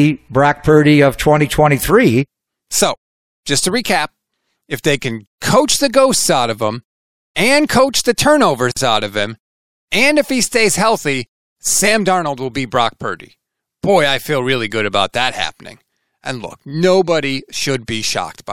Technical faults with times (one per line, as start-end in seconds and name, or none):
8.72-8.76 gap at a join of encoded pieces